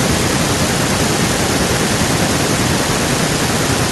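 Nothing goes wrong anywhere in this bit of speech, so there's no fault to point to at any moment.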